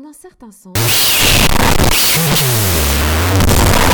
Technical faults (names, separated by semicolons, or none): wrong sample width